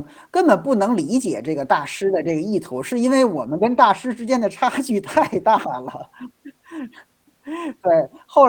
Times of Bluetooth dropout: none

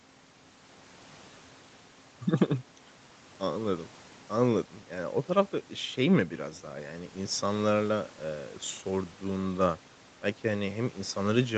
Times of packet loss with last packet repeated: none

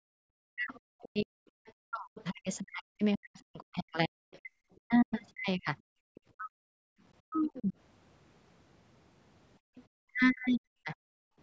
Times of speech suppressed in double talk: 0.05-7.74, 10.04-10.96

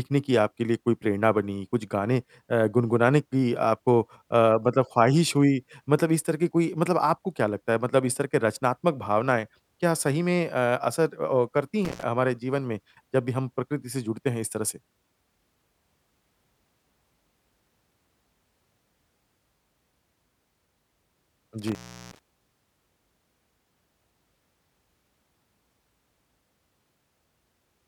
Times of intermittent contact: 11.85-12.03, 21.67-22.19

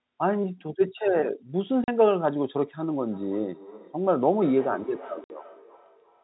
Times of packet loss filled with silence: 1.84-1.88, 5.24-5.30

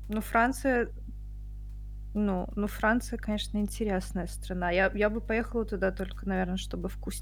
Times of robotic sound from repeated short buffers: none

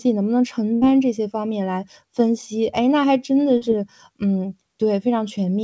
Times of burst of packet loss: 0.74-0.83

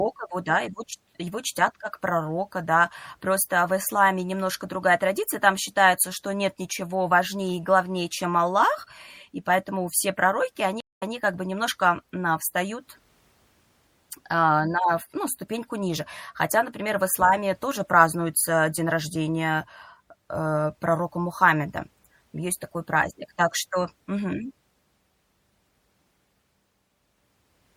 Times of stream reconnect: 10.80-11.14

